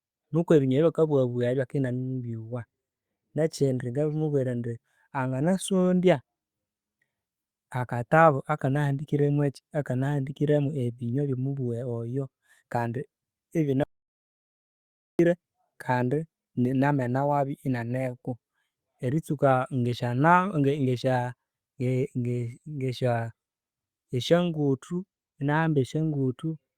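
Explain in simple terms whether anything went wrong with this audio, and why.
Yes, a few things went wrong. All through this speech, the pace feels slightly uneven, with tiny hiccups now and then. That is clock drift between sender and receiver. The sending device's clock ran roughly 4 percent fast compared with the receiving one, so audio kept arriving a little quicker than it was being played out, and the waiting area on the receiving end kept overfilling.

To cope, the receiver made repeated timing corrections from about 0.09 s right through to 26.52 s. It kept trimming out small slivers of sound to catch up, which works out to running at about 104 percent speed. Each trim is tiny and they come at irregular moments, so instead of one obvious glitch you hear a faintly jumpy, hurried rhythm across the whole clip.

There is also an audio dropout to silence from 13.84 s to 15.19 s, a gap of about 1.36 seconds. 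The sound stops mid-flow and the gap is completely dead, without even the faint background hum of the room, then the speech picks up again. The cause was likely a brief loss of the input signal, such as a link or device cutting out, while recording carried on writing silence. Whatever was said during that gap is lost.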